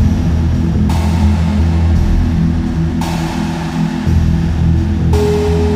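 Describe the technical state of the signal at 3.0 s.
Around 3.0 s the signal is intact, with no dropout, distortion, noise burst or other technical fault audible at that point.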